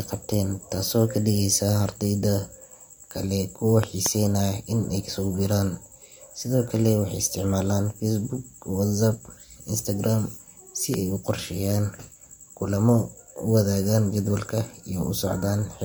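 At 3.83 to 4.08 s, just after "kale kuwa", a double loud pop sits on top of the speech, and a single one follows at 10.94 to 10.96 s, each peaking about 15 dB above the signal. These sharp transients are likely voltage pulses from a plug, switch or static discharge.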